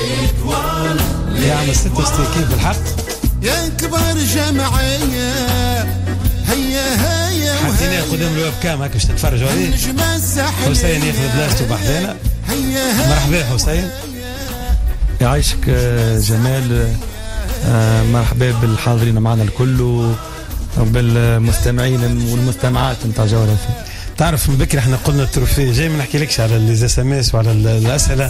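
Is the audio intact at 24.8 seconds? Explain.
No, at 24.8 seconds and throughout, there's MP2 compression, likely at about 80 kbps: starved sub-bands drop out and get coarsely quantised, giving a dull, gurgly, grainy sound.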